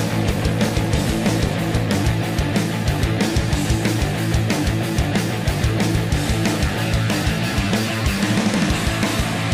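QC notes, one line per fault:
0.00–1.98 s, overlap-add ripple: the audio was rebuilt from windowed frames whose overlap gains do not sum to a constant, so the level dips and recovers by about 11 dB once per frame, around 400 times a second, heard as a metallic buzz with extra tones around each note.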